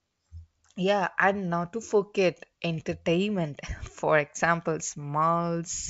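No technical faults can be heard in this speech clip. It carries the band-limited sound of G.722 wideband telephone coding, with the top near 7 kHz and only a faint trace of the codec, which fits the full 64 kbit/s rate.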